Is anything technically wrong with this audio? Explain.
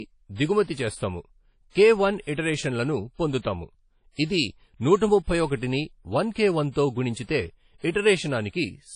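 Yes. Throughout the speech there is plainly audible WMA compression damage, likely from a low-bitrate transform encode, which fits roughly 32 kbps. Long blocks smear quantisation noise across tens of milliseconds, giving ringing, washy hiss that breathes with the voice. Unlike a simple low-pass, the cutoff near 10.1 kHz arrives alongside that swirling noise.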